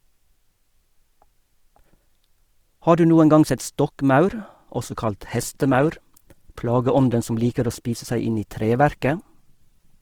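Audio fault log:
4.69 s to the end: adaptive stream at a lower bitrate. The speech abruptly loses quality with no gap or dropout. Codec artefacts become audible. The connection slowed, so the player switched to a cheaper encoded version of the stream. The sharp before-and-after contrast points to a drop from around 64 kbit/s Opus to around 16 kbit/s. Fewer bits leave less detail for high frequencies.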